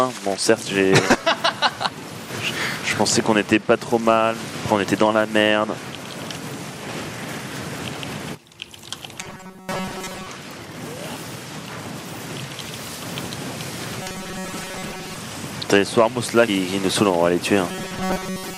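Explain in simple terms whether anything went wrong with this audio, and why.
Two kinds of fault can be heard.

Compressed frames skipped: at 7.04 s and 16.47 s the sound jumps ahead. Pieces of the coded audio, each 26.1 ms long, never play. About two are lost first, about four later.

Robotic sound from repeated short buffers: from 9.20 to 10.27 s, 14.00 to 15.16 s, and 17.68 s to the end, the sound turns into a stiff metallic buzz at 188 Hz. New audio likely arrived too slowly. A tiny slice of about 5 ms was replayed over and over, and most of the real audio was dropped.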